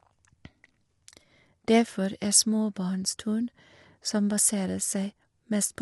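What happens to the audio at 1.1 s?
At 1.1 s, as throughout, the speech carries low-delay AAC compression, likely near 32 kbps: short frames smear the harmonics, leaving it grainy, with nothing above 11.6 kHz.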